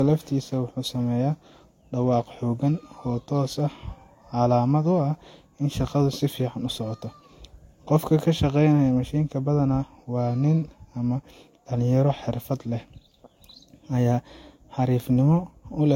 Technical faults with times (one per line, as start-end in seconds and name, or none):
0.00-15.95 transcoding between lossy codecs